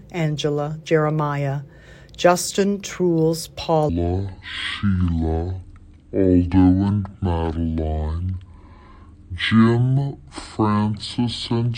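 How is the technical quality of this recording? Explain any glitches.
The recording has one clear glitch, and it takes up most of the clip. From 3.89 s to the end, there's a section at the wrong speed: playback runs at 0.565 times normal, so everything drags and drops about ten semitones, sounding deep and sluggish. Speed and pitch shift together, which likely means that stretch was played or resampled against the wrong clock.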